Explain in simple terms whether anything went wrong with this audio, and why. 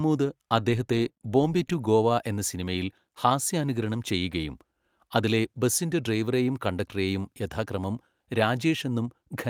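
Nothing went wrong here: the speech recording holds steady throughout, with no technical faults to be heard anywhere in it.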